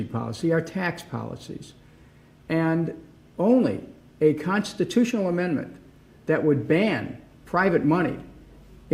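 No technical faults can be heard anywhere here.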